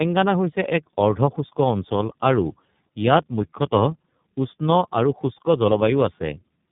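The call crossed links that apparently used different low-rate speech codecs, with a plain telephone hop between them. This is tandem speech coding: each coder re-encoded the previous one's errors, so this speech clip sounds rough, muffled and warbly, with nothing above 3.8 kHz.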